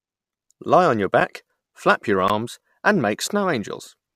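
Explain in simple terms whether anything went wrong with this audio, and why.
Three short dropouts break up this speech, and each one is a block of digital silence. At 1.20 s, between "on your" and "flap your", the sound vanishes for about 8 ms. At 2.28 s, right after "flap your", and again at 3.28 s, it vanishes for about 15 ms. In each case a chunk of the audio was swapped for pure zeros, with no fade in or out. Those hard edges are why each gap comes across as a quick tick or pop.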